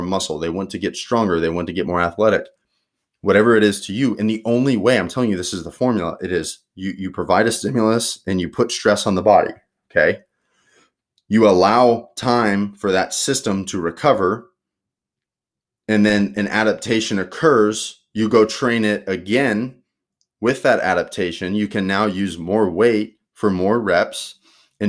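Nothing in this recording stands out as a technical fault at any point, so there's nothing to flag from beginning to end.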